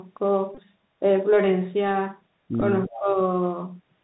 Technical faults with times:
0.00-4.03 Bluetooth CVSD headset codec
0.55-0.59 Bluetooth headset packet repeated
2.61-2.63 Bluetooth headset packet repeated
2.87-3.18 speech suppressed in double talk

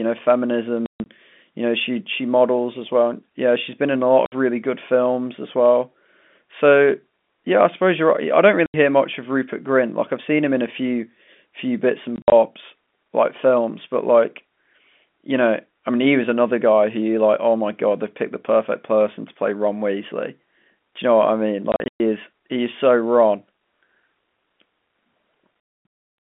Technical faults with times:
0.86-1.06 packet loss filled with silence
4.26-4.32 packet loss filled with silence
8.66-8.74 packet loss filled with silence
12.16-12.32 packet loss filled with silence
21.72-22.00 packet loss filled with silence

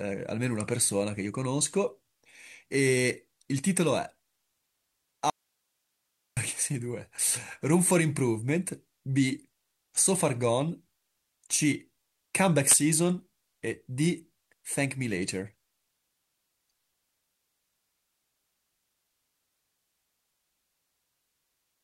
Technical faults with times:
5.30-6.37 audio dropout to a faint residue

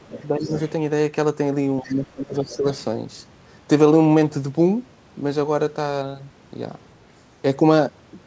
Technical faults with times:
0.00-0.53 speech suppressed in double talk
0.11-0.70 other side's voice leaking through
1.81-2.65 speech suppressed in double talk
1.83-1.95 other side's voice leaking through
2.34-2.56 other side's voice leaking through

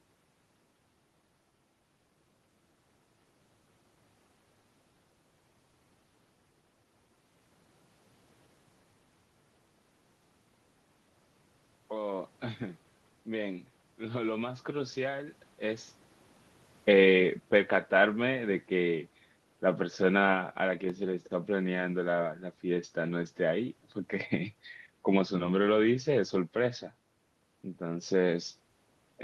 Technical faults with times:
13.27-15.95 automatic gain rising
16.89-19.04 automatic gain falling

